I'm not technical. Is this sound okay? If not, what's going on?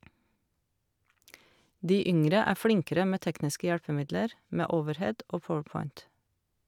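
Yes, it's fine, and there's nothing here that needs fixing.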